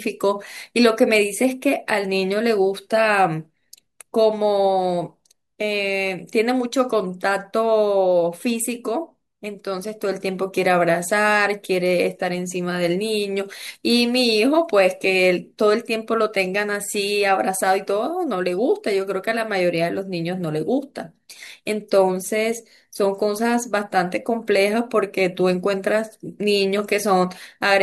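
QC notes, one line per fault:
No faults found.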